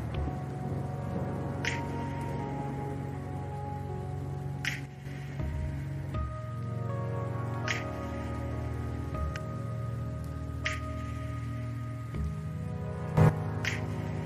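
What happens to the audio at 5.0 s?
Around 4.86 to 5.05 s there's a sudden gain jump: the level drops about 6 dB in one step, background included, likely from a gain change applied without a ramp.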